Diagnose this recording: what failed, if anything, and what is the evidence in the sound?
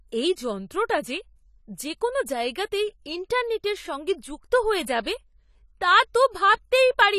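The codec stage has likely failed, with AAC compression damage throughout the speech. Nothing is present above 14.1 kHz, and sibilants and sustained sounds carry a plainly audible smeared, fizzy texture, consistent with AAC-LC coarsely quantising its spectrum at a low bitrate near 32 kbps.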